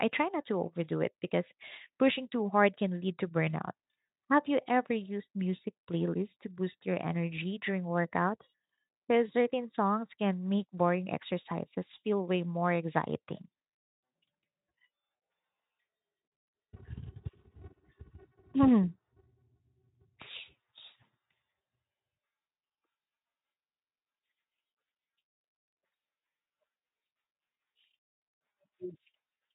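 Nothing in this speech recording registers as a fault; it sounds like it's carried over a Speex speech codec at a fairly comfortable setting, and that path is simply doing its job.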